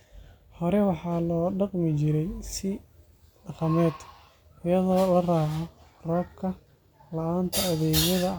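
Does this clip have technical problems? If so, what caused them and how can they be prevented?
No, this clip has no technical problems, so there is nothing to prevent.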